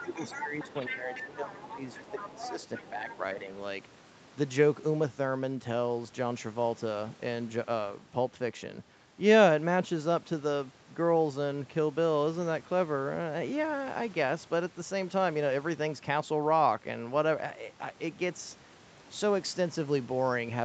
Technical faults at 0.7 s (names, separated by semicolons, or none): speech suppressed in double talk; other side's voice leaking through